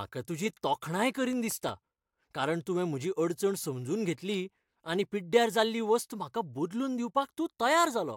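From 1.15 s to 2.22 s the speech carries CD scratch ticks: seven short, evenly spaced clicks, the longest lasting only around a millisecond, at a rate of roughly six or seven per second. The pattern points to a scratch or blemish on the disc that passes under the laser once per revolution. Each pass corrupts more data than the error correction can rebuild, so the player interpolates or mutes those samples, leaving a brief tick at each rotation.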